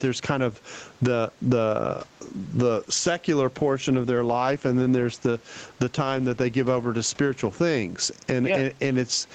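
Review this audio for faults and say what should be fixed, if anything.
Gain pumping runs throughout the speech. The background swells in the pauses and ducks by around 15 dB under each loud syllable. On a waveform, the noise floor visibly rises between phrases; on a spectrogram, the faint background band brightens in every gap. The likely cause is input gain set far too high, with a fast limiter clamping each peak. Lower the microphone gain so the limiter rarely engages.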